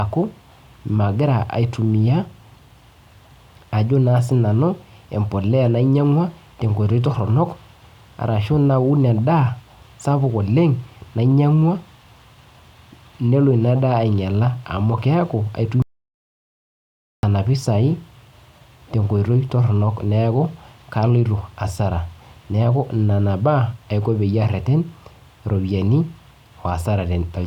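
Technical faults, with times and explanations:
15.82 to 17.23 s, audio dropout to silence: speech cuts off mid-flow and about 1.41 s falls to silence with no room tone, likely from a lost input; the waveform flatlines and the spectrogram shows a blank column.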